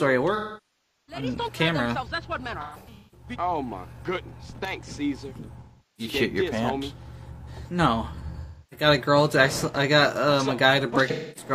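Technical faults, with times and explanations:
0.35–1.23 s, 2.61–3.28 s, 5.60–6.13 s, 8.41–8.87 s, 11.10–11.51 s: AAC frame loss with concealment; the decoder rebuilt missing frames from the last good spectrum, leaving smeared, noisy patches. The first gap, about 0.73 s, is longest.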